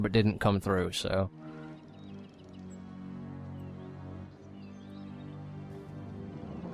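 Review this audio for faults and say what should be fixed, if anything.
Nothing in the signal needs fixing, since it is free of faults across the whole clip.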